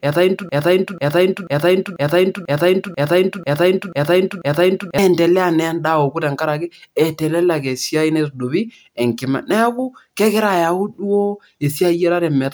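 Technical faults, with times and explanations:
0.49–4.98 s, broken-record loop: the same 0.49 s fragment of speech repeats exactly, back to back, nine times, with no new audio until 4.98 s. The player or stream likely stalled and kept resending its last held fragment, so the intervening audio is lost.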